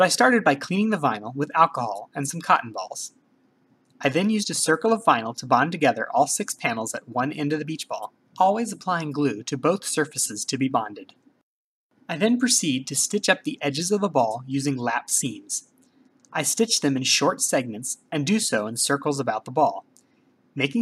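Nothing stood out as a technical problem on listening.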